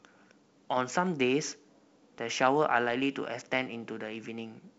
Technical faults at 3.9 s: none

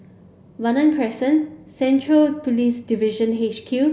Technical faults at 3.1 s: none

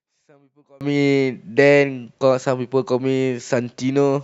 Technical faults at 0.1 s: one channel inverted

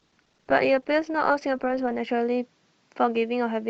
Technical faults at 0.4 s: adaptive stream starting at a low bitrate

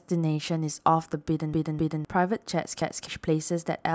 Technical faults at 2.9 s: repeated buffer

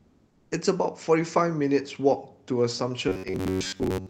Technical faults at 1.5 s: none

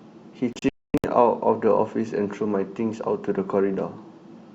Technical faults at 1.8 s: none

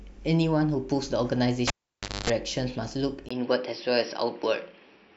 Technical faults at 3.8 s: input switched to a poorer device

